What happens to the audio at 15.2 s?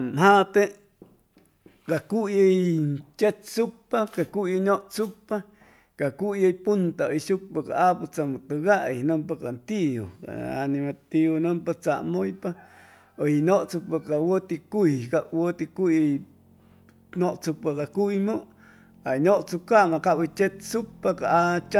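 Nothing goes wrong at 15.2 s; the speech carries on intact through that moment, with no dropout, click, distortion or other fault to be heard.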